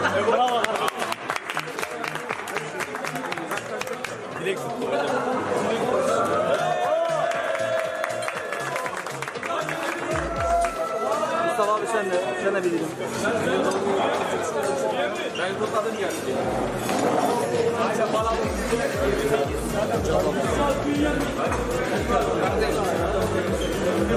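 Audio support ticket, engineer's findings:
Nothing turned up on a listen through, so there's no fault to log for this clip.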